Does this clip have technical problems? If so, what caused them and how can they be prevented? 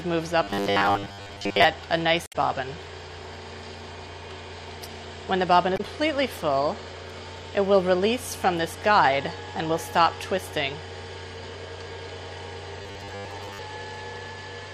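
Yes. From 0.43 to 1.64 s and 12.82 to 13.6 s there is robotic sound from repeated short buffers: a rigid 100 Hz buzz, likely from data starving so that a 10 ms buffer is replayed for most of each stretch. Larger playback buffers and steady input delivery prevent it.

Damaged data in a compressed stream causes brief glitches at 2.24 to 2.36 s and 5.74 to 5.81 s, where the decoder misreads corrupted frames and resynchronises. Checksummed, error-protected transfer of the stream prevents it.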